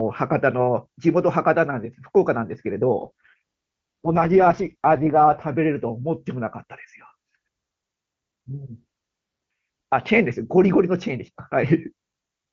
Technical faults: AMR rate drop

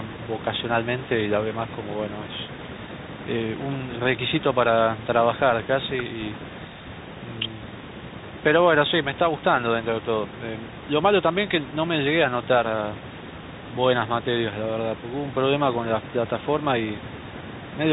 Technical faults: Bluetooth CVSD headset codec

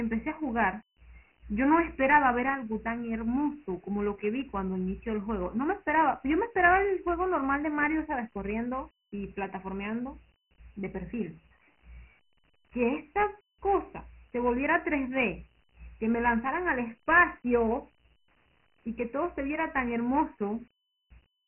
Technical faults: Dialogic VOX ADPCM

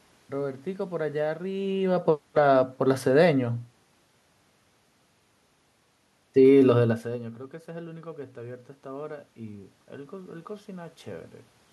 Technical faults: automatic gain falling

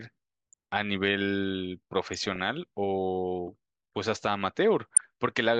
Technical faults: DAB burbling

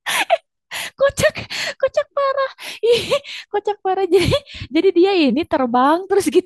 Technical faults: none

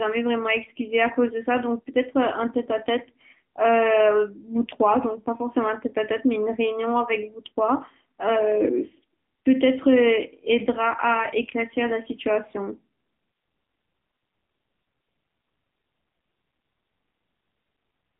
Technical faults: AMR narrowband mobile codec

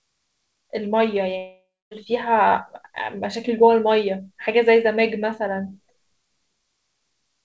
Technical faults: long network dropout

